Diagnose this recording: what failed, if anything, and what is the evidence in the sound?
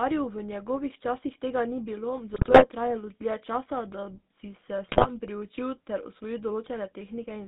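GSM full-rate codec damage runs through the whole speech clip, at the codec stage. The band is confined to roughly 200 Hz to 3.7 kHz, and the voice has a clearly audible buzzy, gravelly roughness. That texture comes from the coder rebuilding speech through a vocal-tract filter excited by regularly spaced pulses, with much of the excitation detail discarded. The result is a coarse approximation of the waveform, which fits the 13 kbps full-rate mode.

GSM bit errors appear in two bursts, from 2.34 to 2.67 s and from 4.86 to 5.20 s. In each, the speech breaks into squawks, pops and gargling. This is a network-stage fault: corrupted bits from a weak radio link reached the decoder. Wrong filter, pitch or gain parameters bend the spectrum and throw the level around frame by frame. The density of the damage points to an error rate of a few percent over those spans.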